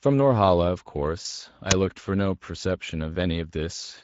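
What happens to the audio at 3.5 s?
At 3.5 s the speech carries the same Speex codec damage heard through the whole clip, plainly audible at that point. Speex is a CELP coder that rebuilds the voice from a vocal-tract filter driven by a coded excitation. The coarse excitation here, which fits a setting near 16.8 kbps, leaves the speech grainy and hoarse. Any content above 4 kHz is a shaped noise fill rather than true detail.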